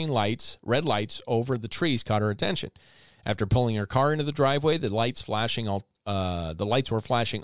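No technical faults can be heard anywhere in this recording of speech. Nothing interrupts, damages or disturbs the audio at any point.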